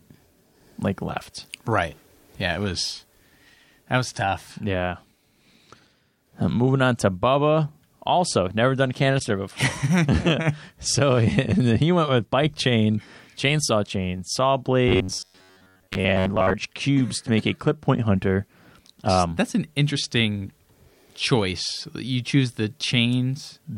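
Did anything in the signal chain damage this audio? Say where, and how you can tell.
Yes, in two places. At 9.17 to 9.22 s, right after "never done", there is a brief burst of misplaced energy, lasting about 46 ms, that doesn't belong to the speech around it. That is a corrupt frame decoded at the codec stage. Bits in the compressed stream were damaged, and the decoder played a couple of frames anyway. Misread gains and codes put energy at the wrong frequencies for roughly the length of those frames.

From 14.89 to 16.55 s, between "chain chainsaw chain saw" and "cubes to make a", the speech turns into a rigid, metallic buzz pitched at 93.8 Hz. It still roughly follows the syllables. This is robotic sound from repeated short buffers, and the likely cause is the driver or buffer stage being starved of new audio. A 93.8 Hz buzz points to a segment about 10.7 ms long being looped. Most of that stretch is repeated material, and the real audio it replaced was skipped.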